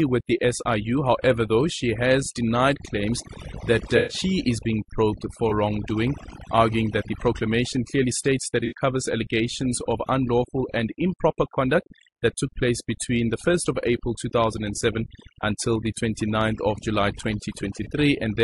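Speech, and the noise removal is overdone throughout: the background drops away and breaks up into little twinkling specks. The voice also sounds rough and grainy, with noise between the harmonics and a dull, synthetic-sounding top end, likely from low-delay AAC compression (AAC-ELD) at a low bitrate, something around 32 kbps. There's AAC frame loss with concealment too, heard as smeared, noisy patches at 3.97–4.17 s (the longest, about 120 ms), 5.49–5.53 s, 8.65–8.73 s and 17.83–17.87 s, where the decoder patches over missing frames from the last good spectrum.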